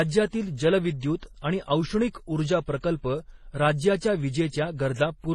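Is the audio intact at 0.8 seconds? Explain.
No. Transcoding between lossy codecs runs through 0.8 s and the whole clip. The speech likely passed through a low-rate MP3 and then HE-AAC, each adding its own artefacts, with nothing above 12.9 kHz.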